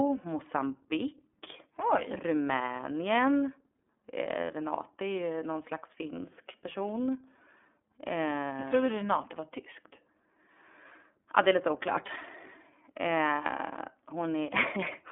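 Throughout, the iLBC codec codes each 30 ms frame independently and removes everything above 3.6 kHz, so the speech sounds muffled, rough and plainly synthetic.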